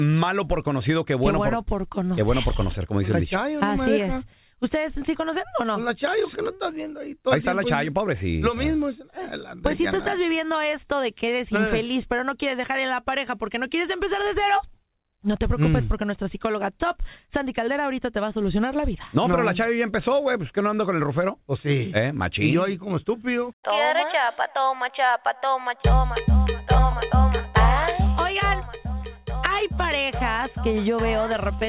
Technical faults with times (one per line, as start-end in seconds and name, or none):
none